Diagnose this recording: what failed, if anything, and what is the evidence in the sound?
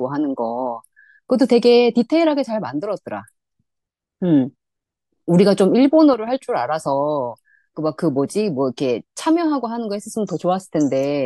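At 6.14 s the speech and its background noise drop together by about 5 dB in one step, with no fade, recovering at 6.27 s. This sudden gain jump is likely a digital gain change in call processing, applied without a ramp.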